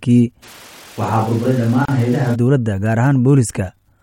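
A speech clip, about 4 seconds long, with two faults. From 0.44 to 2.34 s the sound turns roomy and hollow, with thinner bass. Its level barely changes, but background noise rises to about 25 dB below the speech. This is likely a switch to a distant microphone, replacing the close one. The change in and out is abrupt. At 1.85 s, inside that stretch, the sound drops out for about 32 ms. It then resumes where it stopped. This is a gap at a join of encoded pieces. Each piece kept its encoder's leading delay and padded final frame, leaving a short silence. Its edges are smeared by the codec.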